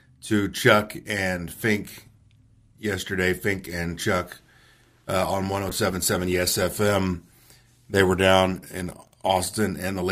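A speech clip with a call bitrate drop from 5.70 s to the end at 10.12 s. The call's bandwidth estimate fell, so the encoder was told to spend far fewer bits. The quality change fits a fall from 64 to 28 kbps. Opus then codes the speech more coarsely and trims the upper frequencies. The sound turns rough, watery and duller. It sits at its worst for about 3 s and does not recover before the clip ends.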